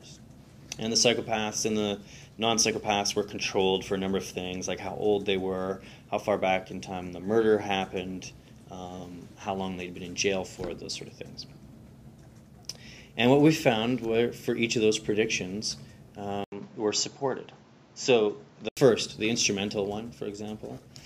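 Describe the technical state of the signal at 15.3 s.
At 15.3 s the signal is intact, with no dropout, distortion, glitch or other technical fault audible at that moment.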